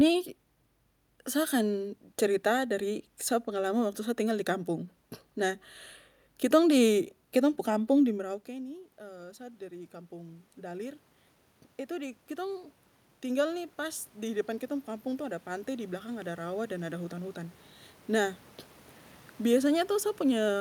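A speech recording in which the voice and the room noise behind it swell upward together twice, from 8.2 to 11.06 s and again from 11.96 to 17.64 s. This is automatic gain rising: when the talker moves back around 8 s, the input falls by about 19 dB, and the gain control slowly climbs to compensate, by about 6 dB and then about 9 dB, lifting the ordinary room noise along with the voice.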